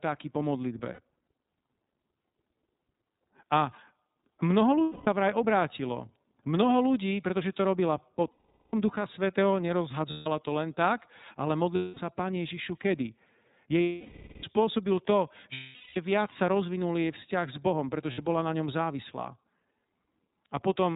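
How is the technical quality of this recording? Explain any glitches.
The quality is poor: the whole recording has a narrowband, slightly rough coded sound, and eight short dropouts are bridged by buzzy sustained tones.

Throughout, the speech sounds muffled and a little synthetic, with nothing above 4 kHz. This is the iLBC codec, a narrowband VoIP coder that codes each frame's excitation independently, which fits its 13.33 kbps mode with 30 ms frames. At that rate the damage is plainly audible: the top end is gone, and the waveform modelling leaves a rough, artificial texture.

At 0.93–1.00, 4.83–5.08, 8.31–8.74, 10.10–10.27, 11.75–11.98, 13.83–14.44, 15.53–15.97 and 18.12–18.19 s, the speech turns into a held, slightly buzzy or breathy vowel. These are lost iLBC frames. When packets go missing, the decoder repeats the last pitch cycle mixed with noise and fades it over longer gaps. The bridged gaps run from 60 ms to 600 ms, and the longest, at 13.83 s, fits about twenty missing frames. 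Because each frame decodes on its own, clear speech returns almost immediately after every gap.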